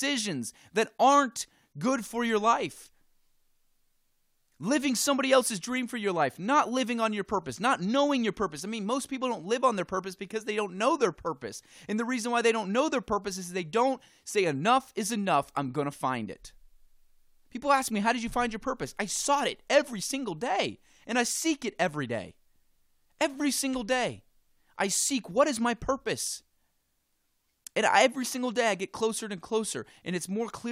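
No technical faults occur anywhere in the speech, so there is nothing to place in time order.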